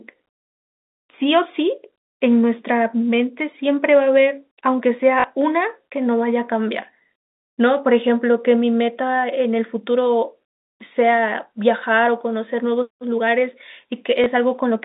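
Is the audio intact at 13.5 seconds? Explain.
Yes, the speech at 13.5 seconds is intact, with nothing there beyond the narrow band of ordinary G.711 telephone coding, which stops short of 4 kHz.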